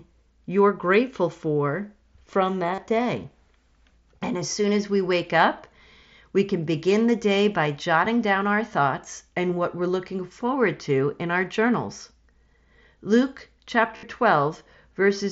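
At 2.74 s and 13.96 s there's concealed Bluetooth headset packet loss. Runs of packets dropped for 37.5 ms and 67.5 ms, and the phone filled each gap by looping recent waveform. You get a brief buzzy held tone, then a slight warble as real speech returns.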